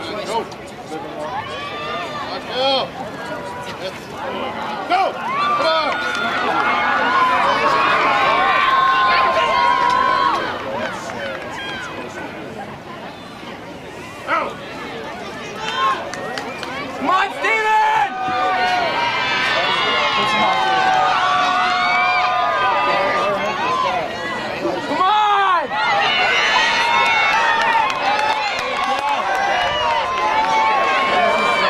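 No technical faults are audible.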